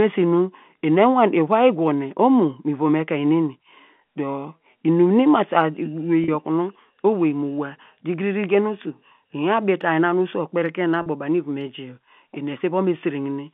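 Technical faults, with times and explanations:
6.24–6.28 s and 11.02–11.06 s: packet loss with pitch repetition. Each 40 ms gap, consistent with two 20 ms packets missing, is bridged by repeating the last pitch period, so the telephone-band speech briefly holds on a slightly buzzy, sustained tone.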